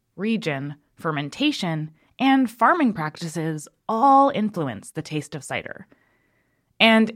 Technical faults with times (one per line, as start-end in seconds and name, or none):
none